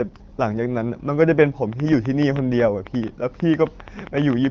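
From 1.73 s to 4.46 s a train of clicks runs over the speech, about 30 uniform pulses at an uneven 8.8 per second, peaking roughly 10 dB above the signal, likely from interference or a faulty connection, over band-limited HD Voice coding consistent with AMR-WB near 12.65 kbit/s.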